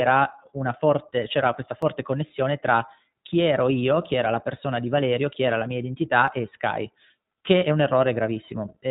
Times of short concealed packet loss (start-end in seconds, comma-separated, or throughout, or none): none